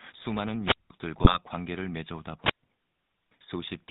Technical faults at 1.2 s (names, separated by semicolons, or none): GSM full-rate codec; GSM bit errors